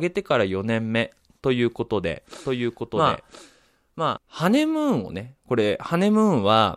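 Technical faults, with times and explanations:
2.45 to 4.18 s, doubled audio track: a dry copy of the speech trails about a second behind, around 5 dB down, cutting in and out abruptly, likely from a slower capture path.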